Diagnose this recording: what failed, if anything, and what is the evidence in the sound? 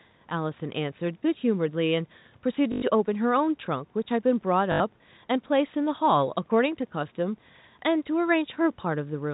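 The failure is at the network stage: packet loss with last packet repeated. At 2.72 to 2.82 s (100 ms) and again at 4.72 to 4.80 s (80 ms), the sound turns into a brief robotic stutter. The receiver kept replaying the last packet until new data arrived. The replays seldom line up with the pitch. The pattern fits 20 ms packets, giving a 50 Hz buzz. On a spectrogram, this appears as identical frozen slices repeating every 20 ms. On a waveform, it appears as one short segment tiled repeatedly.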